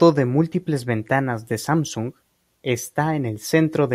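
No technical faults can be heard in this speech recording. There is no point in the audio that calls for comment.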